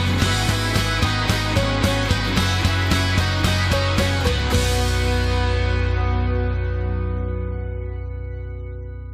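No technical faults can be heard anywhere in the audio; the signal stays continuous and stable throughout.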